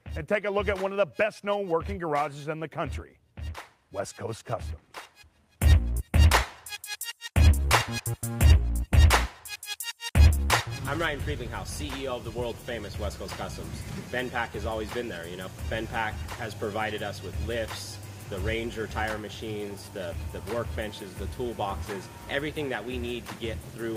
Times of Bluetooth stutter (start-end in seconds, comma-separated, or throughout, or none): none